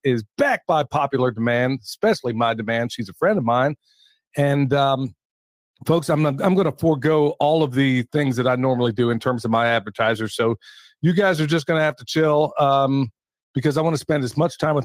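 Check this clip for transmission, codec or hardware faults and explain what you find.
No transmission, codec or hardware faults turn up anywhere in this clip.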